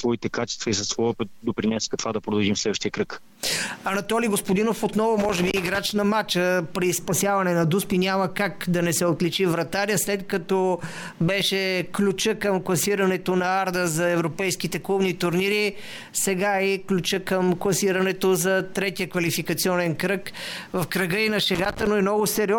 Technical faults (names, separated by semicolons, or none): loose connector crackle